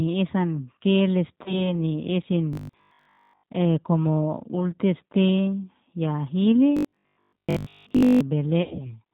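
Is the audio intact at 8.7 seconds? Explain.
No. VoIP packet loss concealed by the speech codec runs from 8.63 to 8.92 s. About 120 ms of audio went missing across 160 ms, the longest gap being 80 ms. The decoder filled each gap by repeating its last pitch and filter at falling gain, so the sound smears into a fading buzzy tone or coloured noise. It stays weak and distorted for a moment after packets resume.

The G.729 codec also applies here, as it does throughout. At 8 kbit/s it rebuilds speech from a vocal tract filter, a pitch predictor and a few pulses per frame, and it passes nothing above 4 kHz. That leaves the speech plainly rough and synthetic.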